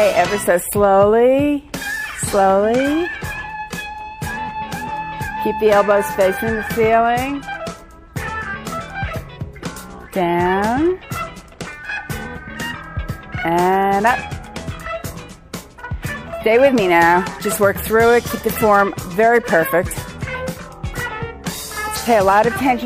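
No technical faults are audible.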